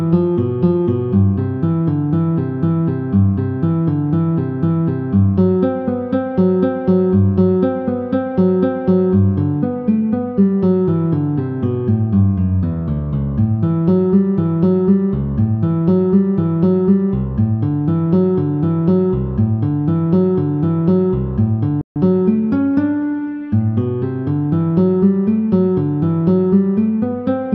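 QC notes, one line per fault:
21.81–21.96 s, playback stall: the sound cuts out mid-flow for about 145 ms, then resumes, likely because the player ran short of data or its output thread was held up. The waveform drops to a flat line, leaving a clean vertical gap across every frequency in the spectrogram.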